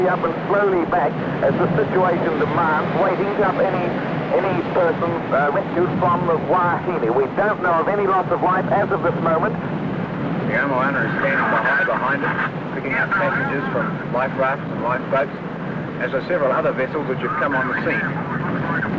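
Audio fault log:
3.44 s: skip ahead, the sound jumps forward with no gap, roughly a second lost and joined straight on, unlike a dropout which leaves silence or fill.
4.35 to 9.93 s: jitter buffer speed-up, the sound runs about 5% faster at unchanged pitch as short pitch-period pieces are cut repeatedly, totalling roughly 0.3 s, not a pitch-shifting resample.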